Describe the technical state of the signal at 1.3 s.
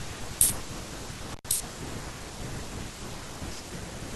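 A connection in the signal chain, most likely a loose cable or plug, briefly loses contact, an intermittent contact fault spanning 1.32 to 1.45 s. For roughly 104 ms of that window the line is effectively open, so the speech drops out or breaks up rather than fading. Each edge of the gap carries a short crackle as the contact breaks and then re-makes, and in between only a faint hiss remains where the signal should be.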